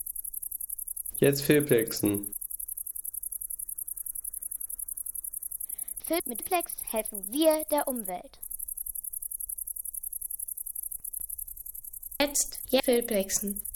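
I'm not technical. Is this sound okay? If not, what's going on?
No, there are three short jumbled spots, at 6.0 to 6.4 s, 10.8 to 11.2 s and 12.2 to 12.8 s. These are chunks out of order: the sound is cut into slices of 200 ms each, and one slice turns up late and plays after the one meant to follow it, or after two at the last spot. Nothing goes missing, but the order scrambles briefly.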